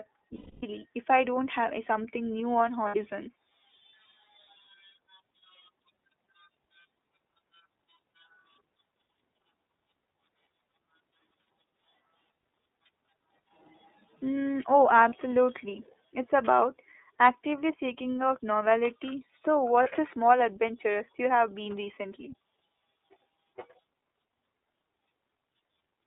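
Speech coming through the iLBC codec, band-limited to roughly 250 Hz–3.7 kHz, with a plainly rough, slightly synthetic edge; the framing fits iLBC's 30 ms mode. There are also lost iLBC frames, where the decoder fills the gaps with a held, buzzy repeat of the last pitch cycle. The longest is 270 ms, from 0.35 to 0.64 s, just before "if I don't have". The others are 60 ms at 2.88–2.95 s after "something new on", 30 ms at 15.09–15.13 s, and 30 ms at 19.83–19.87 s just before "a small adventure you".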